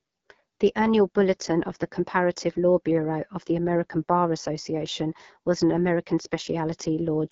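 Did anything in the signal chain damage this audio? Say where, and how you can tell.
Yes. The speech sounds rough and raspy across the whole clip, with a dull top that stops completely at about 7.4 kHz. This damage happens at the codec stage, in an AMR wideband (HD Voice) codec, AMR-WB. It models the voice as pulses through a vocal-tract filter up to 6.4 kHz and fills the band above that with shaped noise. The harshness points to a low rate, consistent with 8.85 kbit/s, where too few bits remain to shape each pulse cleanly.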